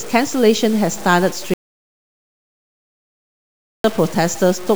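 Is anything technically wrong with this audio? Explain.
Yes, there are two faults in this speech clip.

Low bit depth without dither runs through the whole recording. It sounds as though the audio was likely truncated to very few levels, which fits about 6 bits, with no dither. Because the rounding error tracks the signal, the voice carries a grainy, rasping distortion that shifts with each syllable, with noise roughly 20 dB below the speech. Quiet tails break up or sputter. On a waveform, the samples sit on a coarse staircase of levels. A spectrogram shows broadband hash riding on the speech and vanishing where the speech stops.

An audio dropout to silence runs from 1.54 s to 3.84 s, about 2.31 s of lost material. The speech cuts off mid-flow and returns just as abruptly, and the gap is dead digital silence with no room tone. This points to the input likely being lost while the recorder kept writing silence. 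On the waveform, this is a flat line. On a spectrogram, it is an empty vertical band with hard edges on both sides.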